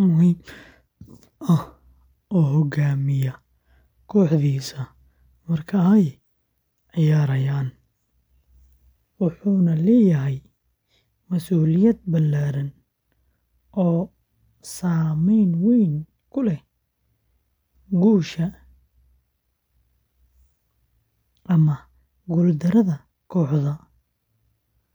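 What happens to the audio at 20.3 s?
Nothing goes wrong at 20.3 s; the speech carries on intact through that moment, with no dropout, click or other fault.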